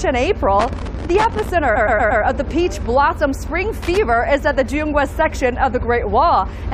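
From 0.60 to 1.50 s there is loose connector crackle: a worn or dirty contact intermittently breaks the signal path, chopping the audio into an irregular scratchy burst. The same crackle returns briefly from 3.83 to 3.97 s.

Between 1.75 and 2.22 s there are repeated frames. A block of about 116 ms plays four extra times, which fits a run of compressed frames being duplicated. It is heard as a stutter, and it lengthens the audio by about 0.46 s.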